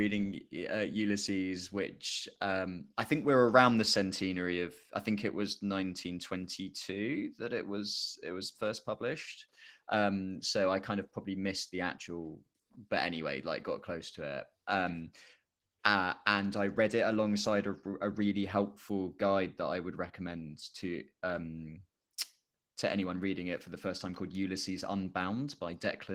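Speech runs through Opus voice compression for its whole length, with a plainly audible hoarse, slightly robotic texture, which fits about 16 kbps in hybrid mode. Unlike a simple low-pass, the top octave stays present, only coarsely coded above the linear-prediction band.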